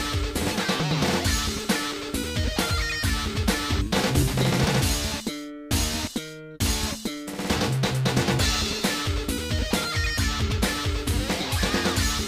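No faults are audible anywhere in the clip.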